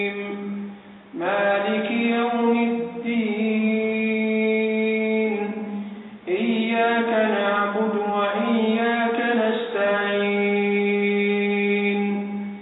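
Nothing is technically wrong with this audio, as no fault can be heard anywhere in it.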